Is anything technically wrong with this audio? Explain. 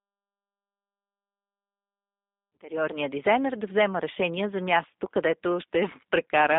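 Yes. G.729 codec damage runs through the whole speech clip and is plainly audible. This low-rate VoIP codec doesn't send the waveform itself. It sends a vocal tract filter, a pitch predictor and a few pulses per short frame, and the decoder rebuilds the speech from those. The sound is confined to a telephone band of about 250 Hz to 3.7 kHz, consistent with an 8 kbit/s stream, and the voice comes out rough and synthetic, thin and buzzy, with no air above the band. The smooth fade-in ending near 3.1 s is clean.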